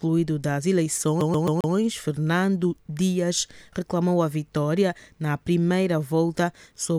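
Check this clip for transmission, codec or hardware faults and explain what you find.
One hardware fault is present, a CD stuck on one turn from 1.21 to 1.74 s. A scratch makes the laser jump back a track each rotation, so a 133 ms slice of sound repeats four times, each pass cut by a brief mute, giving a rapid, even stutter.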